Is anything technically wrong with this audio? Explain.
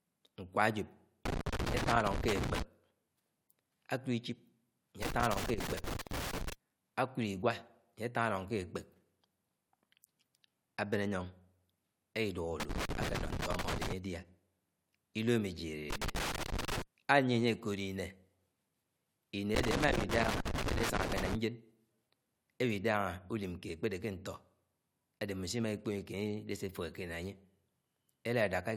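Yes. Loose connector crackle breaks into the speech five times: 1.25–2.62 s, 5.02–6.53 s, 12.6–13.92 s, 15.9–16.82 s and 19.55–21.35 s. Each burst is an irregular scratching crackle. A worn or dirty contact rapidly makes and breaks the circuit, chopping the signal.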